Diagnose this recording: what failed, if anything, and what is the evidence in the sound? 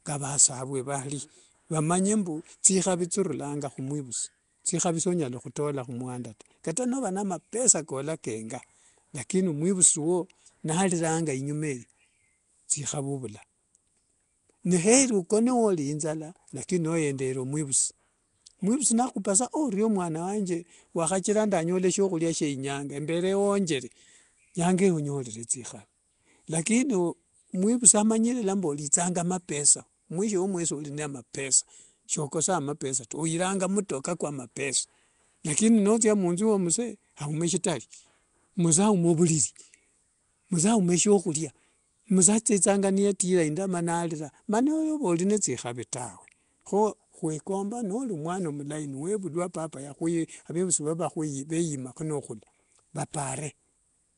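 The damage is at the codec stage and runs through the whole clip. The speech has a rough, hissy halo and a smeared, underwater quality, and there's nothing above 10.6 kHz. That points to Nellymoser compression, likely Flash's Nellymoser Asao at something like 44 kbps. It codes short blocks at a fixed two bits per sample, so weak bands get no bits and are filled with noise. That's where the hiss and smear come from.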